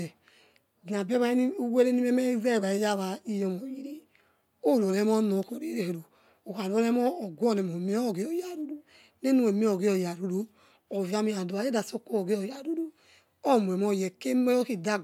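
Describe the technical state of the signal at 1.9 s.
At 1.9 s the speech signal is intact, with no audible fault at that moment.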